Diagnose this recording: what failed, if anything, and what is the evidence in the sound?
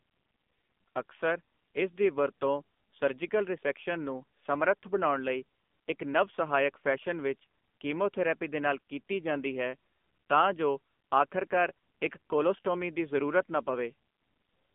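The failure is at the codec stage: AMR narrowband mobile codec coding across the whole speech clip. The band is cut hard at about 200 Hz below and 3.5 kHz above. The damage is plainly audible. The voice sounds buzzy and synthetic. That texture points to a low AMR-NB mode, around 7.4 kbps. The codec rebuilds speech from a vocal-tract model fed by a few pulses per short subframe. At this rate those pulses are sparse, so detail is lost.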